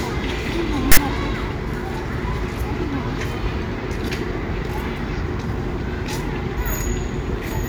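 At 0.92 s the player reads a block of text tags from the file as if they were audio samples, and keeps doing so until 0.97 s. This is file tags played as audio: the bytes of the text fields are pushed straight into the output. Because text characters cluster in a narrow range of byte values, the result is a loud, harsh rasp pushed off to one side of zero. It is heard as a burst of static about 55 ms long, with abrupt edges at both ends.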